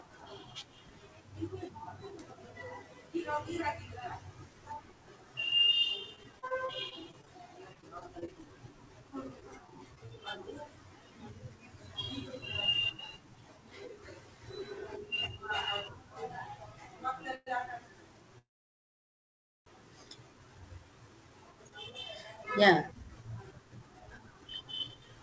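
From 6.16 to 8.53 s the speech turns choppy and robotic, with small pieces dropping out. A second, briefer burst follows from 9.40 to 10.10 s. This is repeated packet loss (robotic sound). Eighteen holes in the first stretch, the longest about 30 ms, and four in the second were each patched by stretching the preceding sound. Because the patches come in quick succession, the concealment becomes audible as a synthetic, clipped texture.

At 17.35 to 17.48 s the sound hangs for a moment as a brief fading buzz or hiss. A longer halt follows from 18.38 to 19.68 s, where a short tail gives way to about 1.2 s of silence before the audio resumes exactly where it stopped. These are call audio freezes. The likely cause is packets being held up in transit until the jitter buffer ran dry. Since nothing was discarded, each one inserts a pause rather than removing material.

From 20.48 s to the end, the speech runs about 13% fast yet keeps its pitch, giving a hurried delivery. 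This is a jitter buffer speed-up. A backlog of audio had built up, and the receiver trimmed many tiny pitch-period slices, roughly 0.7 s in total, to bring the delay back down. Throughout, the band stops at 8 kHz, consistent with a wideband call codec such as G.722.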